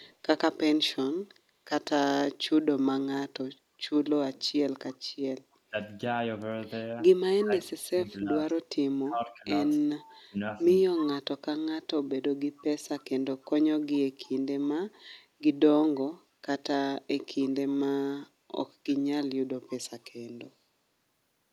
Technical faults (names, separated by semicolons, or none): echo leak; speech suppressed in double talk